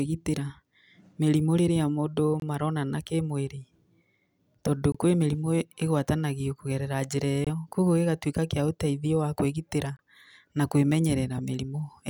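Speech here, broken by a gap between chunks: short holes of about 23 ms at 2.40 s (after "mĩrimũ rĩrĩa mũndũ"), 4.92 s, 7.45 s (before "kũguo gĩgatũika kĩa ũteithio") and 9.97 s. Every 2.5 s, at each chunk join, the sound is interrupted but not lost.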